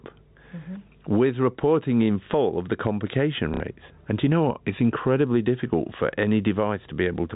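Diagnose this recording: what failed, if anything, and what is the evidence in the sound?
Throughout the speech, the level breathes: the gain ducks under each loud syllable, with a gain swing of around 15 dB, and loud and soft parts sit squashed together. The likely cause is gain pumping at the capture or call-processing stage. A fast limiter pulls back input gain set far too high, which is unlike a plain clip or a fade because the level follows the signal itself.

From 3.54 to 3.6 s, 60 ms of audio is filled by a brief robotic stutter instead of silence. That fits two lost network packets, with the receiver replaying the last one until fresh data arrived. This is packet loss with last packet repeated, and the repeated material is what separates it from a dropout, while the G.711 telephone band carries on around it.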